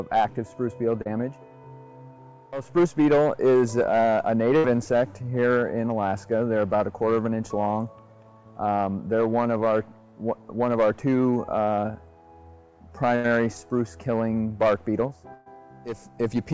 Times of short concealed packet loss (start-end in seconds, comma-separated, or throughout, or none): 1.02-1.07